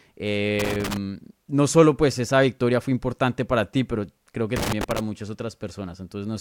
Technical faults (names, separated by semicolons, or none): loose connector crackle